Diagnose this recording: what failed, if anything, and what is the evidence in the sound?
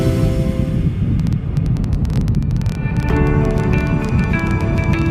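Train of clicks from 1.20 s to 5.07 s: a run of roughly fifty similar, sharp ticks arrives at about 13.7 per second, spaced unevenly, and peaks about 5 dB above the level of the surrounding sound, so it is heard through quiet gaps as well. The uniform pulse shape with an irregular pace most likely points to the analogue wiring or interface stage, where nearby equipment couples bursts of interference into the line or a faulty connection or power supply injects pulses intermittently.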